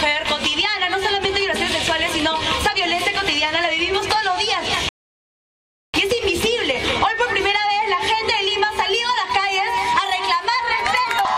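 At 4.89 s the audio stops dead and stays silent until 5.94 s. That is a rebuffering stall. The player ran out of downloaded audio and waited for more. Playback then picks up exactly where it stopped. Nothing is skipped, but about 1.05 s of dead time is added.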